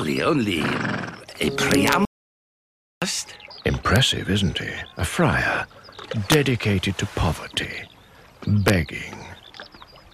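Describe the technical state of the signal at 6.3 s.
Integer overflow at 6.32 to 6.34 s: peaks about 1 dB past the integer limit wrap to the opposite sign instead of limiting, producing a sharp crack.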